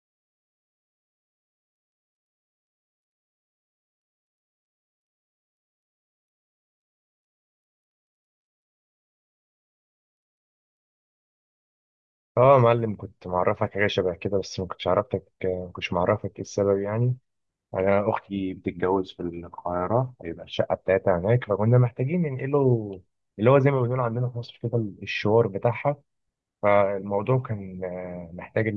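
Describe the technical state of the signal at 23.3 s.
At 23.3 s the speech signal is intact, with no audible fault at that moment.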